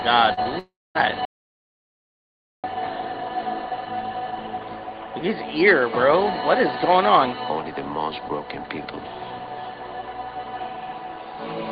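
The clip is call audio carried over a WebRTC path, and its top end stops near 12 kHz, which fits Opus at around 20 kbps. Two short concealed packet losses come first, at 0.33 to 0.39 s and 0.43 to 0.47 s. In each, a few hundredths of a second never arrived. The receiver stretched the last sound to cover the hole, leaving a brief smear before the real audio resumes. From 0.59 to 0.97 s the sound turns into a fading synthetic continuation and then dead air for about 0.23 s. That pattern is most likely a long network dropout, with about 0.36 s of audio never played. From 1.25 to 2.64 s the audio cuts to silence, with no room tone at all. That points to an audio dropout to silence, where the input was lost for about 1.4 s and silence was written instead.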